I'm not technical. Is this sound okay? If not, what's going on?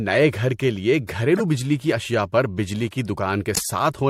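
No. At 1.37 to 1.41 s, right after "گھر کے لیے" and just before "بجلی کی اشیا پر", there is a quick glitch, and a longer, louder glitch follows at 3.55 to 3.66 s. Both are corrupt frames that were decoded anyway: parts of the compressed audio were damaged, and the player still turned them into sound, putting energy in the wrong places for a split second.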